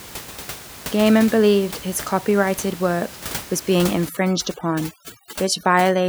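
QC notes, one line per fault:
4.09 to 6.09 s, overdone noise removal: from here to the end, a noise reducer clamps down far too hard on a background that was sitting only about 16 dB under the speech. Any frequency band close to its noise estimate gets pushed way down or cut outright, so the room noise drops away and breaks up into little twinkling specks, and the quieter bits of the voice get dragged out too.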